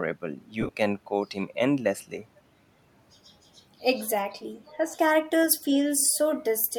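This is a speech recording with three brief faults. From 0.61 to 0.69 s, lost LE Audio frames break up the sound. About 45 ms of audio is missing, spread across 75 ms in short gaps of roughly 15 ms at most. That pattern fits six lost 7.5 ms LC3 frames. In each gap the decoder fills in by repeating the last spectrum with scrambled phase. The voice therefore turns briefly into a noisy, grainy smear instead of dropping to silence. The gaps are too short for the fill to fade out. At 4.14 to 4.18 s the voice dips sharply for about 40 ms, by roughly 15 dB at its deepest. This is likely speech suppressed in double talk. The echo canceller hears both ends active at once. It cannot tell the near talker from loudspeaker echo, so it pulls the level down for a moment. From 5.98 to 6.09 s a faint delayed copy of the voice follows about 250 ms behind, roughly 20 dB below the main speech. It sounds like an echo leak. 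One side is on a loudspeaker, and its echo canceller let part of the returning sound through.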